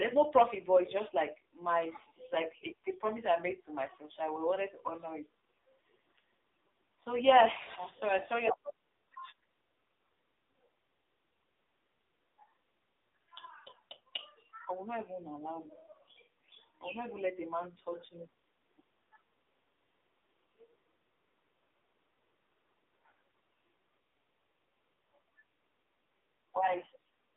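Throughout, the speech carries AMR narrowband mobile codec damage: nothing above 3.7 kHz and little below 250 Hz, with a heavily buzzy, synthetic texture that fits a low AMR-NB mode near 5.9 kbps. Unlike simple band-limiting, the voice itself sounds rebuilt, not merely muffled.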